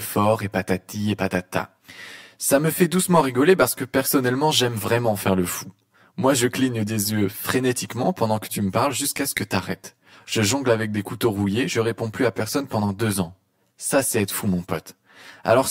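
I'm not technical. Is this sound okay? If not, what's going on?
No. The speech sounds hollow and a bit phasey from start to finish. This is channel delay, which causes comb filtering. One side of the stereo recording arrives about 10 milliseconds after the other. When the two sides are mixed into one, some pitches cancel out. The first gap sits around 50 Hz, with more gaps evenly spaced above it. Those missing pitches leave the speech thin and tunnel-like the whole way through.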